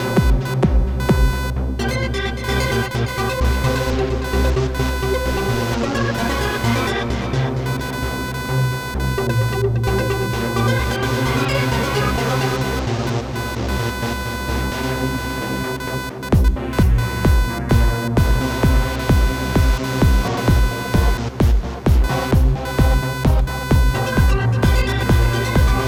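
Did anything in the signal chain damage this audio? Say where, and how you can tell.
Yes. In the analogue wiring, computer activity noise runs through the whole clip: a chirping buzz pulsing roughly 500 times a second, about 10 dB below the signal. Processor load shifts the shared ground, so it tracks the machine, not the sound. Spectrograms show comb-like harmonic stripes.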